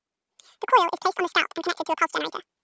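From start to finish, a wrong sample rate doubles speed and raises pitch a full octave, which fits 8 kHz speech being played back at 16 kHz unconverted.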